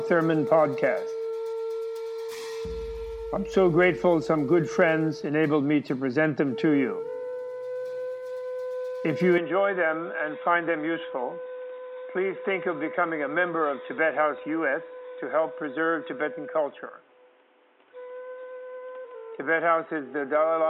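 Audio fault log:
9.38 s to end: input switched to a poorer device. From 9.38 s the sound turns abruptly dull and boxy with no gap at the change, and nothing remains above 3.8 kHz. The level drops by about 5 dB, and a new noise floor appears, roughly 35 dB under the signal. The sudden bandwidth loss, tonal shift and different background noise at a single instant likely come from the system changing its capture source to a narrower-band microphone or headset profile.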